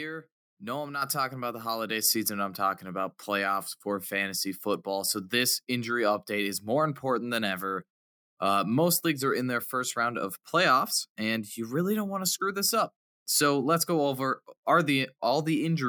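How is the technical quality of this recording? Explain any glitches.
There's one glitch, a microphone volume stepped up at 1.02 s: software raised the input gain about 7 dB at once, so voice and background jump louder together.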